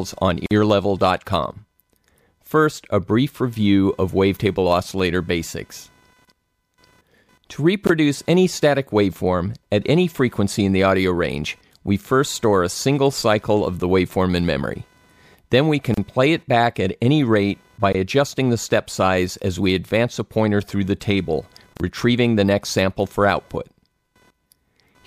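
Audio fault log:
throughout: computer activity noise, a faint buzz near 500 Hz, roughly 40 dB below the sound, rising and falling with computer load rather than the audio itself.
0.46–0.51 s, 15.94–15.97 s, 21.77–21.80 s: gap at a join of encoded pieces, silences of 48.5, 32.9 and 31.2 ms from untrimmed encoder delay and padding; irregular spacing and lengths, smeared edges.
7.87–7.89 s, 17.93–17.95 s: gap between chunks, identical 20 ms holes about 10 s apart, where chunk boundaries left silence; the fixed spacing distinguishes them from the join gaps.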